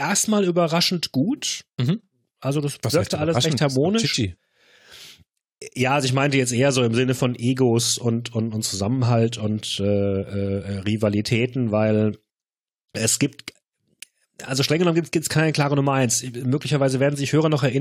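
No technical faults can be heard anywhere in the recording; the speech signal stays intact and continuous throughout.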